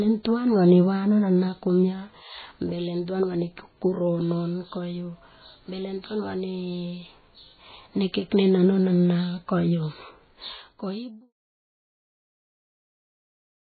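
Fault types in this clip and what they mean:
MP3 compression: The speech has nothing above 4.5 kHz and sounds watery and swirling throughout, with chirpy, smeared s sounds. Unlike a plain low-pass filter, the weak detail flickers from frame to frame, which points likely to heavy MP3 encoding near 16 kbps.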